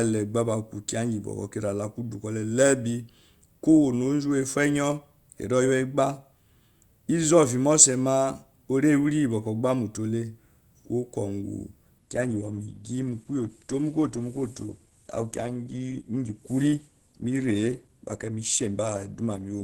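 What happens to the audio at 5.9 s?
At 5.9 s the speech runs on intact, with no dropout, click, distortion or other fault at that moment.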